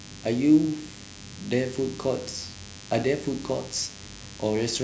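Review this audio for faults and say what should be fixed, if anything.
DECT cordless phone buzz runs throughout: a thin 100 Hz buzz with dense harmonics, roughly 20 dB below the speech, from 10 ms radio bursts rectified in the audio circuit. Move the DECT base and handset away from the microphone and interface, or use shielded cabling.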